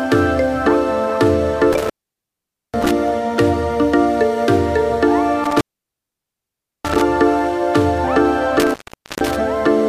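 Intermittent contact at 1.73 to 2.91 s, 5.44 to 7.01 s and 8.60 to 9.36 s: a loose connection opens for about 0.84 s, 1.24 s and 0.46 s, and the sound drops out. The waveform falls to near-flat between crackly edges, seen as vertical broadband streaks on a spectrogram.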